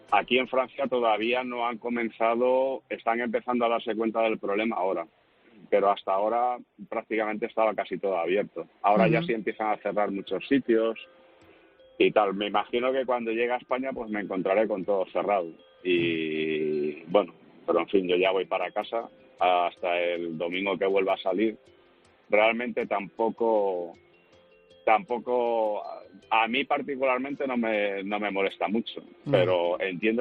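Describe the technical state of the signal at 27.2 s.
At 27.2 s the signal is intact, with no audible dropout, distortion, glitch or other technical fault at that moment.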